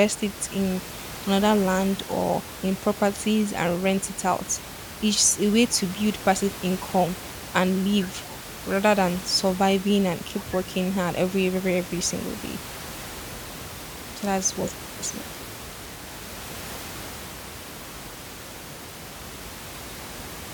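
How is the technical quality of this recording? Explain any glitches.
No glitches turn up anywhere in the recording, and the only thing underneath the speech is a bit of room noise sitting about 14 dB below it, which belongs to the space rather than to any fault in the system.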